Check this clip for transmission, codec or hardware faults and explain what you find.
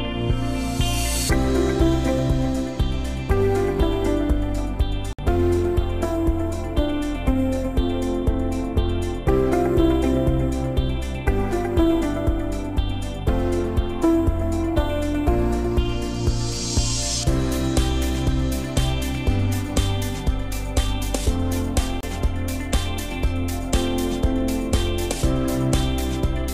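There are two brief dropouts, both consistent with a Bluetooth stall. The first runs from 5.13 to 5.19 s, about 57 ms of silence. The second runs from 22.01 to 22.03 s, about 25 ms. Each time the sound cuts cleanly to nothing, then resumes. The likely cause is radio interference delaying packets. The receiver's buffer empties, so playback halts until the resent data arrives.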